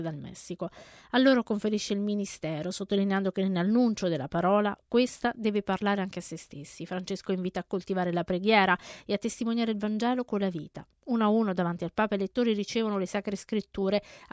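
No technical faults can be heard anywhere in the recording; the signal stays continuous and steady throughout.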